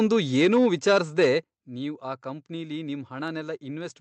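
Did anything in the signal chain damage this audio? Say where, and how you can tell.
Yes. Microphone overload at the converter, 0.0 to 1.26 s: peaks are flattened and crackle, about 5 dB over. Likely input volume set too high.

Microphone volume stepped down in call processing. Level drops about 3 dB at 0.45 s, then about 8 dB at 1.44 s, before "ನೀವ್ ಆ ಕಂಪ್ನಿಲಿ". Likely automatic gain reacting to clipping.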